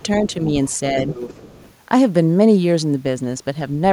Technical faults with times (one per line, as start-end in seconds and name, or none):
0.68-0.77 other side's voice leaking through
1.09-1.74 other side's voice leaking through